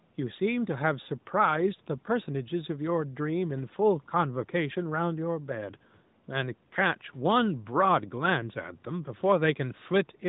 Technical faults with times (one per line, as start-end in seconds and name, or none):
none